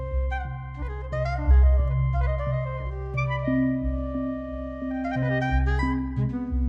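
Nothing here calls for comment, since the audio runs along without any technical faults to point to.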